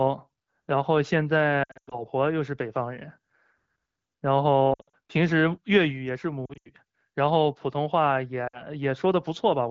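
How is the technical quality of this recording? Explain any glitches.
The recording has lost AMR speech frames in four bursts: 1.64–2.03 s, 4.73–4.96 s, 6.46–6.69 s and 8.47–8.65 s. Beneath them, the AMR-WB coding sounds clean.

In each burst, corrupted frames were concealed by replaying the last pitch and vocal-tract settings at falling gain. Speech warbles, smears and briefly sinks, with runs of up to 0.1 s. A spectrogram shows frozen, smeared harmonic bands with energy dips, and the waveform envelope sags.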